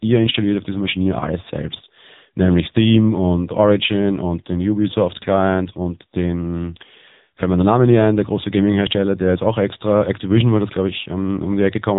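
Speech passed through the AMR narrowband mobile codec for its whole length, and the heavy damage fits a low AMR-NB mode of about 6.7 kbps. Nothing above 3.8 kHz survives, so the audio sounds muffled and boxy, with a buzzy, synthetic edge.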